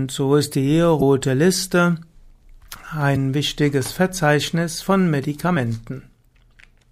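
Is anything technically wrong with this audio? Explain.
Yes. Damaged data in a compressed stream at 0.98–1.02 s, 3.12–3.17 s and 5.53–5.57 s: corrupted bytes make the decoder lose frame sync, producing a brief glitch in the speech.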